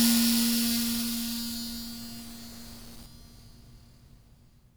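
A stuck bit runs from the start of the music to 3.06 s, where the signal clears. It sounds like a harsh, buzzy grit laid over the music. The likely cause is one fairly high-order data bit held fixed, so roughly half the samples are pushed off by that bit's weight, a step of about 45 dB below full scale, in a pattern that follows the waveform and turns into distortion.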